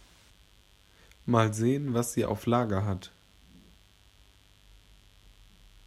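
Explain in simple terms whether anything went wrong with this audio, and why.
A mains buzz runs under the speech from start to finish. It is a steady, raspy hum tied to the 50 Hz power supply. Electrical switching noise leaked into the recording. It sits well below the speech but never stops.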